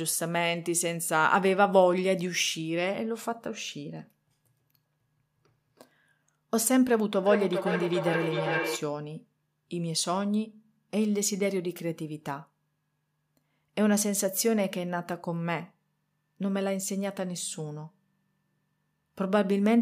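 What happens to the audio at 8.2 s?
From 7.23 to 9.08 s, feedback echo between two devices: another device's playback loops into the microphone, returning the speech roughly every 0.4 s, only about 3 dB quieter. These are distinct spaced repeats, not reverb's smooth tail.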